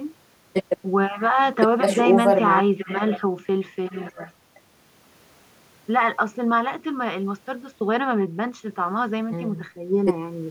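No technical faults are audible.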